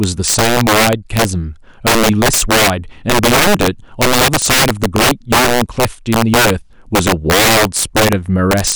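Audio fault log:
Throughout: integer overflow, about 11 dB overdrive wraps loud speech peaks (roughly 7% of samples) to opposite sign, giving violent cracks; waveform shows abrupt sign flips, spectrogram broadband vertical streaks.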